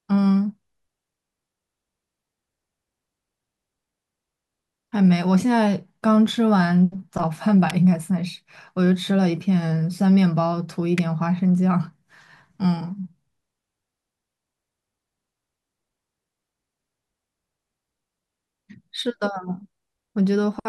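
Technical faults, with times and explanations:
7.70 s and 10.98 s, electrical switching spike: a nearby switch, motor or static discharge likely arced, and the audio line picked up the burst of interference. Each spike lasts around 10 ms and is heard as a sharp snap sitting on top of the speech, unrelated to it. The first is the louder, peaking near -10 dBFS. The second is a little quieter, near -15 dBFS.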